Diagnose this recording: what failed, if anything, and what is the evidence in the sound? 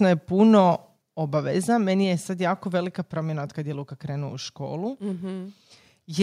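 At 1.02 s speech and background fall by about 4 dB: microphone volume stepped down, likely by call processing. The waveform envelope steps lower and the spectrogram dims evenly.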